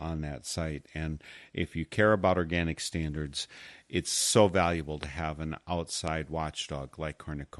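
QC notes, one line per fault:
Throughout: MP2 compression. The speech sounds dull and carries a gurgling, granular roughness, with upper bands flickering on and off. This is likely starved MPEG Layer II coding, consistent with around 80 kbps. Unlike MP3 swirl, the damage sounds coarsely stepped, band by band.
5.03–5.05 s and 6.08–6.10 s: loud pop. Each is a single sharp thump about 15 dB above the speech, likely from a voltage step such as a switch, static or driver glitch. The speech continues underneath, so these are added pulses, not dropouts or edit clicks.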